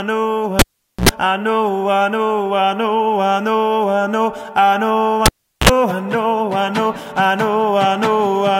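Cable pulled and plugged in at 0.59 s and again at 5.26 s: a live lead is yanked and reinserted, each time with a pop, a gap of near silence (about 450 ms, then about 390 ms), and a short 60 Hz mains buzz lasting roughly 80 ms and 53 ms while only the plug tip makes contact. A second pop marks the signal returning, at 1.09 s and 5.69 s.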